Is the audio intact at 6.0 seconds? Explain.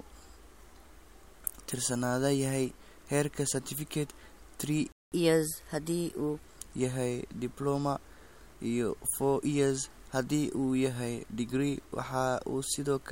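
No. The catch-up at higher speed runs from 5.12 to 6.45 s, and 6.0 s falls inside it. After a stall, the player works through its accumulated backlog by resampling it faster, here at 1.15 times normal speed. Because this is resampling rather than time-stretching, pitch rises with tempo, by about two semitones. The speech sounds hurried and slightly chipmunk-like over that stretch, then settles back to its normal rate and pitch.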